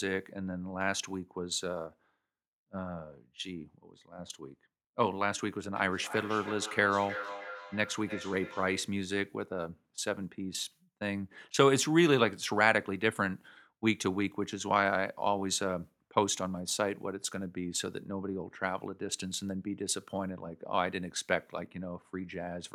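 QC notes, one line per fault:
5.76–9.06 s, feedback echo between two devices: two devices on the same call share a room, so one device's loudspeaker plays the other's microphone feed back into that microphone, and neither echo canceller can remove sound its own device did not play. The sound returns at a steady interval of roughly a third of a second, each pass thinner and more ringing, peaking at about 11 dB below the speech.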